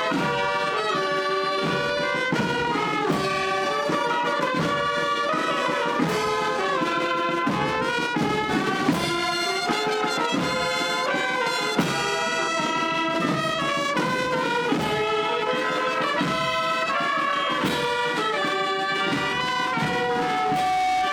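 From 19.18 s a single steady tone near 745 Hz rises out of the sound, swelling over about a second and a half until it sits roughly as loud as everything else, and it is still ringing when the clip ends at 21.12 s. This is loudspeaker feedback squeal: the microphone was hearing its own loudspeaker, and at 745 Hz the round trip through the loop gained more than it lost, so that one frequency kept feeding itself and growing.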